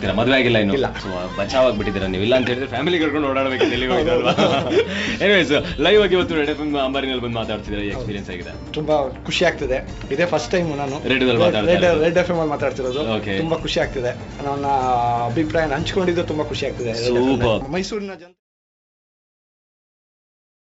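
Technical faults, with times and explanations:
No technical faults can be heard in this clip.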